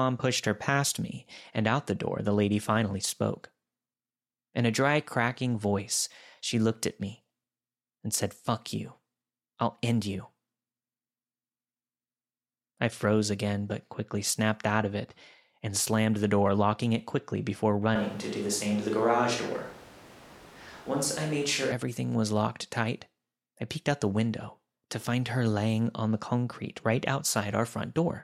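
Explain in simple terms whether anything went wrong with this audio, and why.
From 17.96 to 21.72 s, speech suddenly turns roomy and hollow, with more background noise but similar loudness: likely a switch to a distant microphone.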